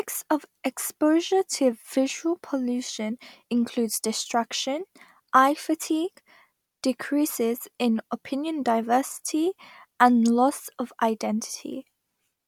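No technical faults can be heard anywhere in the speech recording; the signal stays continuous and stable throughout.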